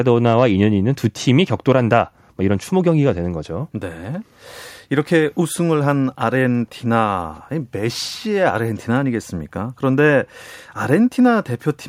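Nothing here gives a listener any trouble, since the speech comes through without a single glitch, dropout or hiccup anywhere along the way.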